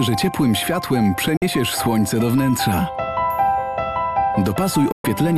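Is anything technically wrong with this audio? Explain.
Yes. There are two digital broadcast dropouts, at 1.37 to 1.42 s and 4.92 to 5.05 s. The receiver muted after losing valid frames. Sound fades out within 3 ms, leaving silent holes of 48 ms and 120 ms.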